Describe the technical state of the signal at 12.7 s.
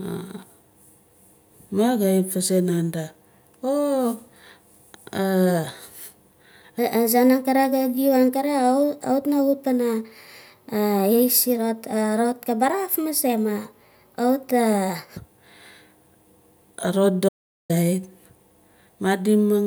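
At 12.7 s the speech sits inside a section at the wrong speed, running from 6.79 to 15.17 s at 1.19 times normal, likely from playback against a mismatched clock. Pitch rises about three semitones and the pace hurries together, unlike a pure pitch shift.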